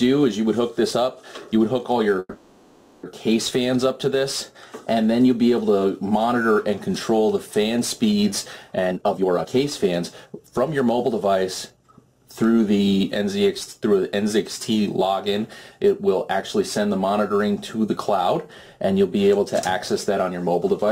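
From 2.19 to 3.05 s the audio stalls in a call audio freeze. The last sound is stretched into a fading buzz or hiss lasting about 840 ms, with roughly 30 ms of silence before the audio resumes exactly where it stopped. Nothing is lost, but the playback now runs about 840 ms later. The likely cause is delayed packets draining the jitter buffer, leaving the receiver to fill the wait until they arrived.

A jitter buffer speed-up follows from 8.78 to 11.30 s. Playback runs at 130% speed while the pitch stays the same, and the sound comes across as rushed. The receiver cuts short pitch-period-length pieces again and again to work down the backlog, removing around 0.7 s in total. A second, milder pass from 11.70 to 12.27 s plays at 114% and trims about a tenth of a second more.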